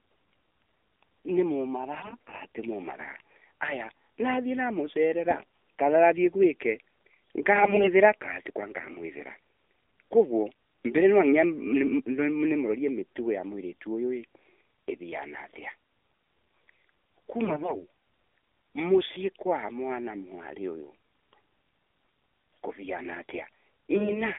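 Throughout, the speech sounds thin, buzzy and synthetic, confined to roughly 300 Hz to 3.5 kHz. This is the AMR narrowband mobile codec at 7.4 kbps, with too few bits to model the voice cleanly.

From 2.02 to 2.42 s, just before "ti mumaraa haya nathii", the voice turns hoarse, scratchy and gargly while keeping its pitch and level. The same happens from 7.56 to 7.89 s, just before "kaa tiko", and again at 17.45 to 17.77 s and 23.96 to 24.23 s. These are AMR bit errors: flipped bits in weakly protected parts of the frames put the voice model's pulses and fine settings in the wrong place.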